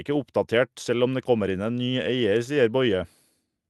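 No technical faults are audible in this speech.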